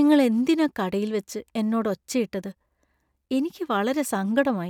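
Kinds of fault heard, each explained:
Nothing wrong turns up anywhere in this recording, so there's no fault to list here.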